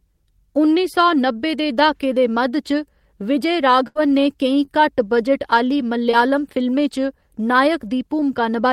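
In this speech recording, the sound at 3.87 to 3.97 s stretches into a held, fading sound, then jumps ahead: a burst of packet loss, about 80 ms concealed by extending the last sound. Brief smears at 4.65 to 4.69 s and 6.11 to 6.15 s are short concealed packet loss, roughly 20 ms gaps patched over by the decoder.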